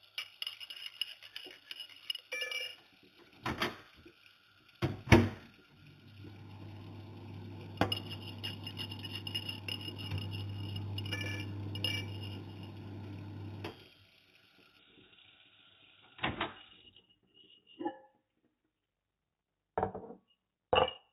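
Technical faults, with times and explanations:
0.00–14.79 s, imaging from linear upsampling: muffled top with faint metallic shimmer at 4–8 kHz, about 15 dB down, where straight-line interpolation from likely 8 kHz sampling mirrors the band.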